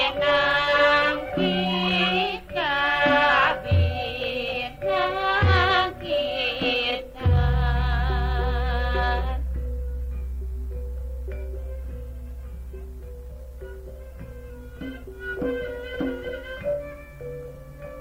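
No technical faults are present anywhere in the clip.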